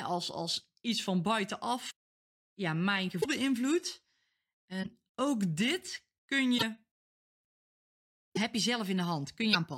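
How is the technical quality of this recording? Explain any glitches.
The speech breaks up six times. There are short glitches at 1.90–1.92, 3.20–3.26 (just after "ja mijn"), 4.82–4.87, 6.57–6.63, 8.35–8.38 and 9.52–9.56 s. Each is a broken MP3 bit reservoir, likely from dropped 26.1 ms frames. The next frame borrows stray data, so the speech skips ahead with a brief chirp, burst of noise or short hole.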